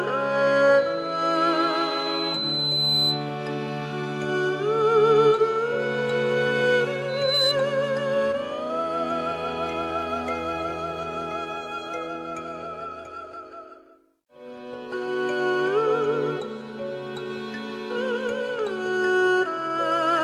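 From 0.77 to 3.33 s and 7.08 to 7.56 s, loudspeaker feedback squeal: the microphone re-amplifies its own loudspeaker until a 4 kHz tone runs away, swelling over about two seconds, then a fraction of one, to roughly 5 dB above the sound. Spectrograms show a bright horizontal line at 4 kHz.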